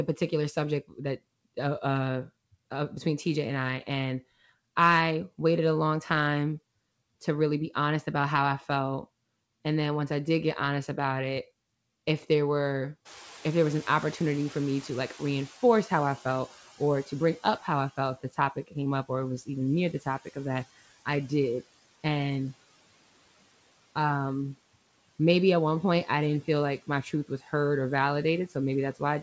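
Right after "it if there were", at 13.05 s, background noise surges in by about 21 dB, then sinks over 4.9 s until 17.95 s, just before "if the". This is the noise suppressor catching up: its noise estimate lagged the sudden rise, reaching about 13 dB of reduction only gradually.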